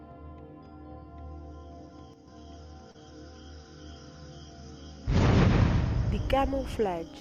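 From 2.14 to 2.28 s, the sound likely loses one stereo channel in a brief one channel drops out fault. After the mono sum, the shared content falls abruptly by about 6 dB for roughly 0.14 s, and anything carried only by the missing side vanishes before the level snaps back.

At 2.91 s, a late packet causes a short stall. The jitter buffer runs dry, so the receiver holds the last sound for 32 ms until the packet arrives, then resumes from the same point. Nothing is lost, but that moment lingers unnaturally with a slight buzz or dip, and everything after it lands 32 ms later.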